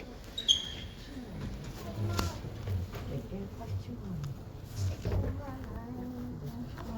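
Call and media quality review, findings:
No audible faults found in this sound clip.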